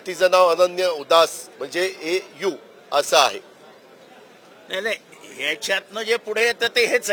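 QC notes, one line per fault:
throughout: crude rate conversion. The rate was raised by nearest-sample copying, which fits a 44.1 kHz to 48 kHz step, so samples repeat in a fixed pattern without filtering. This leaves an inharmonic fizz roughly 25 dB below the sound, following loud, high passages.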